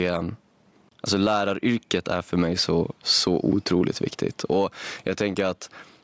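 All the way through, the speech has gain pumping: the gain swings by about 10 dB, likely a limiter fighting gain set far too high.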